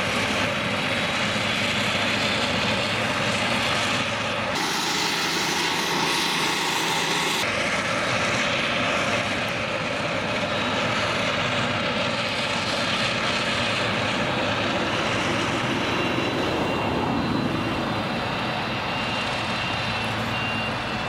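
A section at the wrong speed, likely from that stretch being played against a clock about 1.58 times too fast, runs from 4.55 to 7.43 s. There the audio hurries and jumps up roughly seven semitones in pitch, then snaps back to normal rate and pitch.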